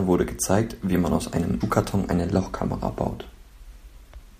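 At 1.60 to 1.62 s the speech is broken by a brief glitch lasting about 24 ms. This is damaged data in a compressed stream: a short run of the encoded bytes arrived corrupted, so the decoder misread or discarded the affected frame, lost its place in the bitstream and had to hunt for the next valid frame header before clean decoding could resume.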